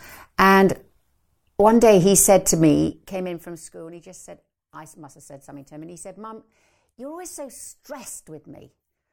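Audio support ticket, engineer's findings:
Zipper noise, 2.64 to 3.77 s, between "day he said to" and "and he just said". Ticking rides on speech during a level drop of roughly 25 dB. Gain stage stepping unsmoothed, around 40 increments a second, each step clicking. Likely per-buffer gain update in the fader or volume control. Fix: ramp gain per sample across each buffer.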